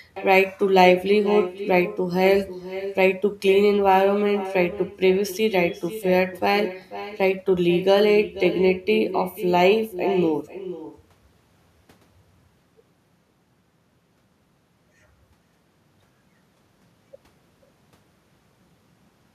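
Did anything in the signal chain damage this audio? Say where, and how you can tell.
Yes: echo with no canceller, present throughout the clip, damaged this speech at the call-processing stage. Every phrase is trailed roughly half a second later by a quieter copy, about 12 dB down, thinner than the original. That delayed shadow is the talker's own sound returning after the far end played it over a loudspeaker and its microphone picked it up. No echo canceller removed it before it travelled back across the network.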